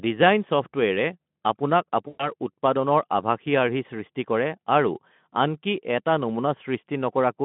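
A speech recording carried over a Speex narrowband call, with the band limited to roughly 150 Hz to 3.4 kHz, loses a run of packets at 2.07 s, about 120 ms of audio, which fits six 20 ms frames. The decoder's VoIP packet loss concealment fills the hole by extrapolating the last pitch and vocal-tract filter while ramping the gain down, so the sound smears into a buzzy tone or coloured noise that fades through about 2.33 s and stays weakened for a moment after real packets resume.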